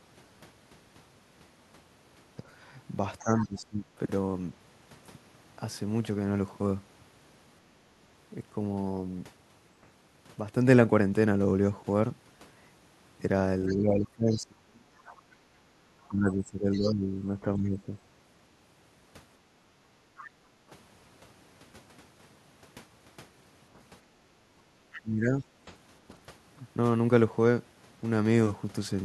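At 3.19 to 3.46 s the other side's voice leaks through, about 15 dB below the talker, likely residual loudspeaker echo the canceller failed to remove. From 3.22 to 4.0 s the talker's own speech dips by roughly 15 dB for about 0.7 s, which is likely speech suppressed in double talk as the canceller attenuates both voices together. The same pair returns at greater length: leakage from 13.68 to 16.9 s at about 20 dB down, with double-talk suppression spanning 13.69 to 20.56 s, around 3 s of affected speech in total and drops near 20 dB. A short leaked scrap sits at 20.17 to 20.28 s. From 24.36 to 25.45 s suppression cuts the speech by roughly 15 dB over about half a second. Within it, at 24.69 to 24.74 s, the background is gated by the echo canceller, with the room sound falling about 12 dB for 50 ms before recovering. Another brief leak follows at 24.93 to 25.0 s.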